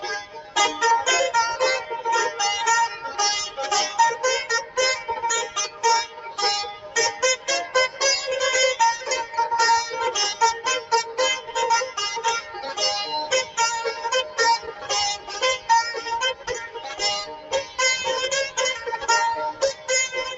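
A speech-tuned noise suppressor was left running on this sound for the whole clip, treating steady tones and decaying tails as noise. Its gain swings by around 10 dB, so held sound pumps and thins while attacks pass through, all within a call path whose content stops near 8 kHz.

The sound is cut by the noise suppressor at 0.00–0.56, 5.47–6.38, 6.73–8.01, 10.81–11.56, 12.41–12.62, 13.94–16.02, 16.34–17.78 and 19.53–19.89 s. Each time the suppressor misreads sustained material and pulls it down by about 7 to 9 dB, so tails sink abruptly.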